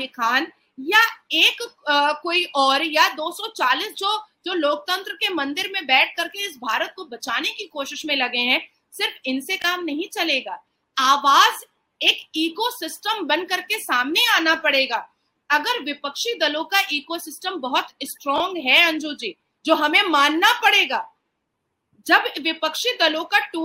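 Around 9.6 s, and again at 18.36 s, there's a quick jumbled blip: chunks out of order. A 20 ms piece plays one chunk late, swapped with its neighbour, so nothing's missing, but three hard joins make a brief garbled stutter.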